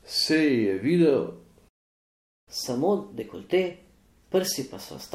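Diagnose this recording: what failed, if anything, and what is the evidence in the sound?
Playback stall in the player's buffer stage: the speech cuts off mid-flow at 1.68 s and the output stays silent until 2.48 s, a gap of about 0.78 s. The cause is likely buffer underrun or a blocked playback thread. On the waveform this is a flat line with abrupt edges on both sides. The spectrogram shows a fully blank vertical band with no decaying tail, unlike a natural pause, where room tone and noise would remain.

Catch-up at higher speed follows directly from 2.48 s to the end of the clip. The player is resampling its backlog to recover the lost time, so the speech runs at 1.15 times normal speed and sounds hurried and raised in pitch by roughly two semitones. On the spectrogram, harmonics and formants sit proportionally higher than before the gap, and syllable spacing on the waveform is visibly compressed compared with the opening section.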